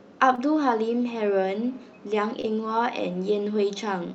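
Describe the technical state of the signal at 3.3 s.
At 3.3 s the speech is intact, with no dropout, glitch or distortion, only the steady band-limiting of the call codec, whose content stops at about 8 kHz.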